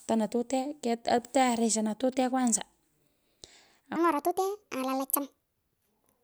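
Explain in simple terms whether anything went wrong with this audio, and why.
From 3.96 s to the end at 6.24 s, the speech jumps into a section at the wrong speed: it runs about 1.45 times too fast and sounds roughly seven semitones higher. Unlike a plain pitch shift, the timing hurries too, likely from a wrong playback clock.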